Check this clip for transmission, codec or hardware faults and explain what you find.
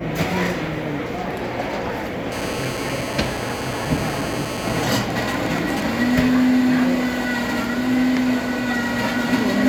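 Two kinds of radio interference from a nearby 2G phone appear, back to back.

From 2.32 to 4.81 s, GSM phone buzz: a phone in a call transmits 217 bursts per second, which the audio circuit rectifies into a harsh, harmonic-rich 217 Hz rasp about 12 dB below the sound.

From 4.81 to 5.83 s, GSM signalling bursts: with the phone's user silent mid-call, transmission drops to sparse burst groups, which become even ticks with a longer 217 Hz buzz twice a second, around 10 dB down.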